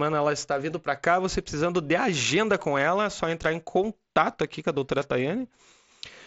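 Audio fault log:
No fault is heard in this speech clip. It passes through the mSBC Bluetooth headset codec, which caps the band at about 8 kHz and adds a light grain on the louder sounds.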